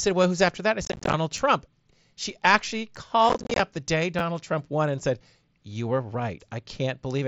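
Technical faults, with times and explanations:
0.85–1.14 s and 3.29–3.60 s: unconcealed Bluetooth headset packet loss. Over spans of about 0.3 s, roughly half the audio drops out in scattered holes, the longest 22.5 ms in the first burst and 30 ms in the second. The missing headset packets are replaced with silence or an idle pattern rather than patched over. The abrupt gap edges give a rough, chopped, crackly texture over the mSBC link, which otherwise carries the speech at wideband.
1.38 s, 2.96 s and 4.19–4.21 s: repeated buffer. New audio arrived late, so the last block was played again: once at 1.38 s and 2.96 s, twice at 4.19 s. Each repeat lasts about 10 ms, which fits a 10 ms buffer. The hard joins make a brief click or buzz rather than an audible stutter.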